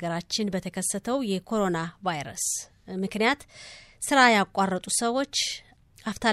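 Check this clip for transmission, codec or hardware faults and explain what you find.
Nothing wrong turns up here: the speech comes through steady and intact, with no faults from the transmission, codec or hardware side to point to.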